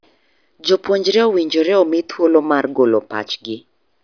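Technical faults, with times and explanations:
No technical faults are audible anywhere in this speech recording.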